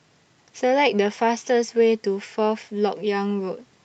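Nothing stood out on listening to this speech clip.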